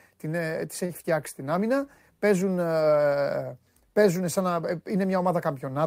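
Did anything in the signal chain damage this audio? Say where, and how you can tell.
Yes: a short stall from a late packet at the network stage, around 0.85 to 0.92 s. The speech holds for about 39 ms with a slight buzz or dip, then resumes where it paused, adding 39 ms of delay. A lost packet would instead leave a gap or skip.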